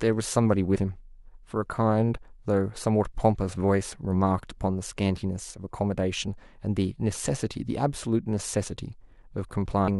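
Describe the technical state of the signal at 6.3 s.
At 6.27 s the compressed stream carries damaged data: a short run of bytes in the encoded speech is corrupt, so the decoder cannot interpret the frame it lands in. It loses synchronisation and has to hunt for the next valid frame header before normal decoding resumes. For roughly 10 ms the intended signal is disrupted, which comes through as a brief chirp, squawk, click or short hole in the speech.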